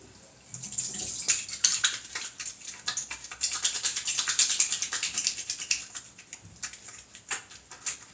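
No faults are audible; the audio shows only the normal trace of call microphone processing, with the lowest bass trimmed and nothing above 8 kHz.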